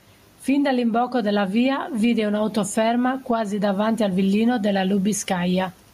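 Throughout the speech, the gain swings by around 10 dB, leaving the speech squashed and flat in level. This gain pumping likely comes from microphone gain set far too high, with a fast limiter or compressor clamping down on every peak. The room noise sits about 42 dB below the speech.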